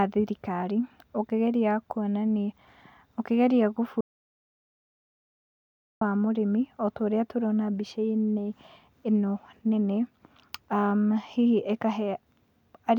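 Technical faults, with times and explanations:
4.01 to 6.01 s, audio dropout to silence: the input feed likely dropped out through a lost connection or a mute, while the recorder kept writing zeros for 2.0 s. The speech stops abruptly into total silence with no room tone, then resumes just as suddenly.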